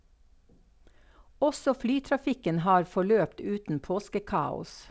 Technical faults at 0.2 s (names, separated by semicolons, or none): none